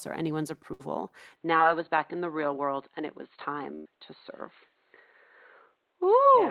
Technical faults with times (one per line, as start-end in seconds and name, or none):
0.73-0.81 burst of packet loss
1.36-6.50 input switched to a poorer device
1.57-1.61 short concealed packet loss
3.75-3.87 burst of packet loss